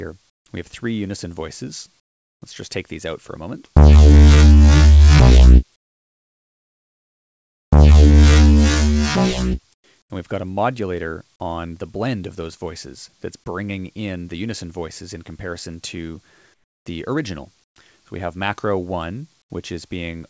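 In the gaps at 0.30, 2.00, 5.76 to 7.72, 9.74, 10.02, 16.54, 17.64 and 19.42 s, the real background gives way to a smooth, featureless hiss, about 14 to 27 dB quieter. This is comfort noise in place of the background, likely because the sender's voice detector stopped transmission and the receiver synthesised filler. All of this sits within a call band that ends at 8 kHz.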